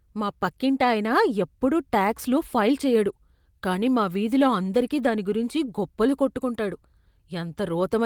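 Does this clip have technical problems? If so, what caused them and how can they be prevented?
No, nothing stood out as a technical problem when listening to this clip.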